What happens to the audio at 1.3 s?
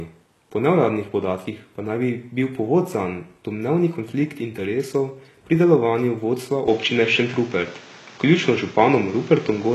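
At 1.3 s the speech has the same gritty, metallic treble heard across the whole clip: s sounds come out lispy and harsh, and nothing reaches above 12.3 kHz. The likely cause is HE-AAC compression at a rate that fits roughly 16 kbps. Only the lower spectrum is coded properly, and the upper band is rebuilt by copying lower bands upward under a coarse envelope. Harmonics therefore fail to line up across the crossover, and the damage is plainly audible.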